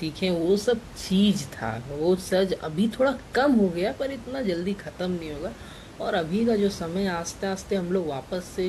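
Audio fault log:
No faults are heard in the speech. Room noise from around the microphone sits in the background, about 18 dB below the speech.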